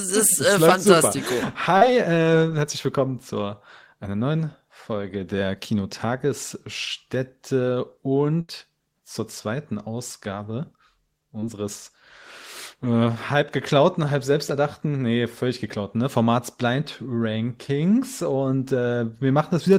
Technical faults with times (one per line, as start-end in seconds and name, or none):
1.77-1.83 short concealed packet loss
8.41-8.50 burst of packet loss
11.40-11.44 short concealed packet loss